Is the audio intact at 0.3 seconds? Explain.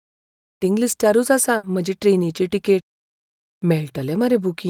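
Yes, the audio is intact at 0.3 seconds, with no fault at that moment.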